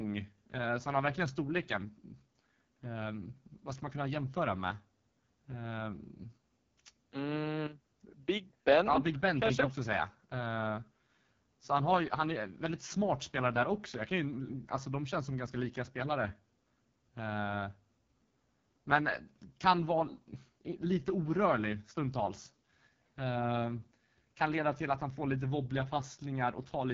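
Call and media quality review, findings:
AMR wideband (HD Voice) codec artefacts throughout: rough, raspy speech, nothing above 7.4 kHz. Heavy coding damage fits AMR-WB at its lowest 6.6 kbit/s mode, too few bits for the excitation pulses.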